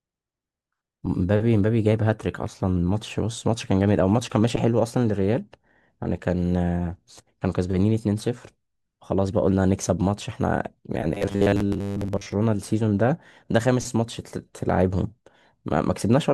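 Speech with robotic sound from repeated short buffers at 11.14–12.32 s: a rigid 100 Hz metallic buzz covers most of it, likely from a 10 ms buffer replayed while fresh audio arrived late.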